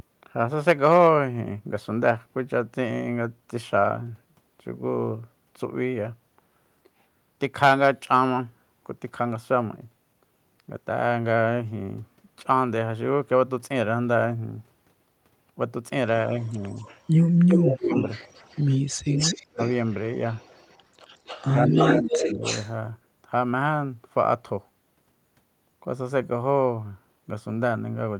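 DC offset runs through the whole recording: the waveform sits shifted off zero by a constant amount. It can't be heard as such, but it eats headroom and leaves a steady component at the very bottom of the spectrum.

Echo leak appears from 16.42 to 17.01 s as a faint delayed copy of the voice, about 30 dB down and 170 ms late. It returns far stronger, only about 5 dB below the speech and 268 ms behind it, from 17.48 to 18.77 s and from 19.1 to 22.72 s. The likely cause is a far-end loudspeaker whose echo canceller let its pickup through.

Speech suppressed in double talk overlaps those stretches. There is a slight dip of about 5 dB at 16.51 to 16.57 s. The voice is pushed down by about 25 dB from 17.62 to 17.95 s and nearly drops out, around 30 dB, at 19.5 to 19.59 s. From 21.52 to 22.42 s it sags in patches of about 10 dB. The echo canceller likely ducked both talkers while they overlapped.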